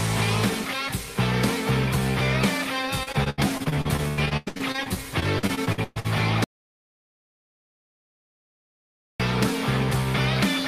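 From 3.03 to 6.06 s, repeated packet loss leaves the stream full of short holes, up to 122 ms, patched by stretching earlier sound, so about a third sounds choppy and robotic. At 6.44 s the input was likely lost, and the audio dropout to silence writes silence for 2.76 s, with no room tone, until 9.20 s.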